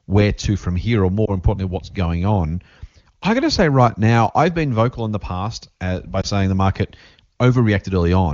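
At 1.25 to 1.31 s and again at 6.22 to 6.25 s, single lost AMR speech frames, each about 20 ms, cause a brief dip or warble. The wideband decoder bridges each gap by repeating the previous frame's pitch and spectral settings at reduced gain.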